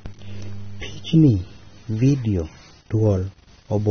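Speech, with plainly audible AAC compression damage throughout the clip: nothing remains above 6.3 kHz, leaving the sound dull and smeared. The lost bandwidth and coarse spectral quantisation point to low-bitrate AAC-LC, likely around 24 kbps.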